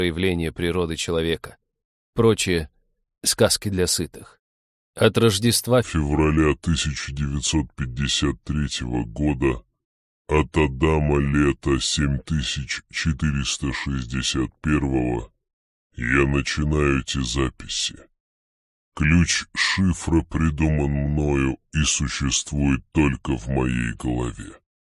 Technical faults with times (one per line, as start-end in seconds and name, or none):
5.83-24.88 wrong sample rate